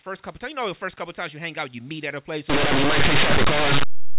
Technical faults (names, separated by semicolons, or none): linear audio read as companded